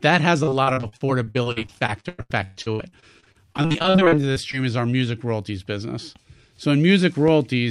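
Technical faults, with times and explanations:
0.43–4.55 s, repeated packet loss (robotic sound): For about four seconds the speech is punctured by some forty short dropouts, the longest 126 ms, together accounting for about a third of the stretch, roughly 1.4 s. Each hole is bridged by stretching out the sound just before it, and the next hole arrives before the speech can settle. The repeated patching gives a choppy, robotic texture with fragments of speech missing.
7.28–7.31 s, loud pop: A single sharp pop, about 5 dB above the speech, sits on top of the audio for under 30 ms while the speech continues beneath it. Its abrupt onset points to a sudden electrical transient, likely a switch, connector or static discharge, that was shaped by the downstream circuitry.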